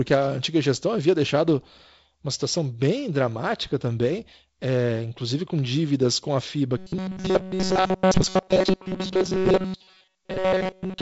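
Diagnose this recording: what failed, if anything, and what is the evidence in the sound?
From 6.78 s to the end, the speech becomes a rigid metallic 188 Hz buzz. This is robotic sound from repeated short buffers, likely a starved driver buffer looping about 5 ms of audio.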